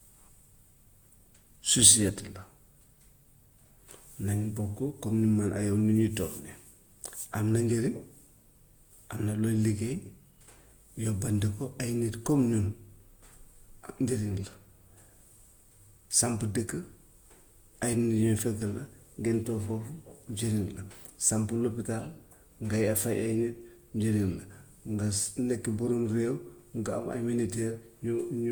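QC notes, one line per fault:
Throughout, generation loss: the speech has a swirly, hollow quality, with smeared consonant attacks. High frequencies still extend to about 20.1 kHz, so the hollowness is not a bandwidth limit. The cause is likely repeated lossy re-encoding, around five passes, which fits an Opus chain at about 64 kbit/s. Each pass quantises on a shifted frame grid, so noise accumulates beyond what that bitrate alone would produce.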